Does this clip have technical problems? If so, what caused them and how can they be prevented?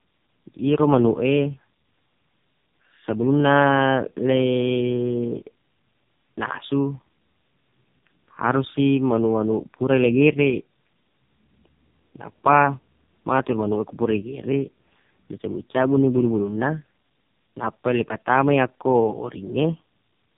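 Yes. Throughout the speech, tandem speech coding: two narrowband coders in a row, which fits AMR-NB at low rates, each re-encoding the previous decoded output. This leaves rough, muffled, warbly speech with nothing above 3.7 kHz. Preventing it means carrying the original coded stream end to end (transcoder-free operation) so the speech is encoded only once.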